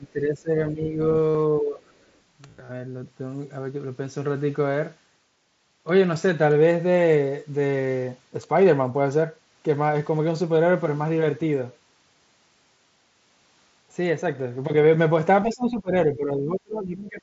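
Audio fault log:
0.0–0.99 s and 1.6–1.85 s, speech suppressed in double talk: The speech dips by roughly 10 dB, then about 15 dB, and thins out in patches. The likely cause is an echo canceller mistaking both talkers for echo and turning everything down.
1.31–1.35 s and 2.46–2.71 s, concealed Bluetooth headset packet loss: First there is a single gap of about 38 ms. Later, about 160 ms of losses are scattered across roughly a quarter second. The receiver patches each hole by repeating the recent waveform. That leaves a brief buzzy, held tone and a slight warble as real audio resumes.
15.49–15.92 s and 16.13–17.21 s, speech suppressed in double talk: Drops reach about 20 dB, and the audio breaks up in pieces almost to the end. This is likely the same echo control clamping down while the far side is also talking.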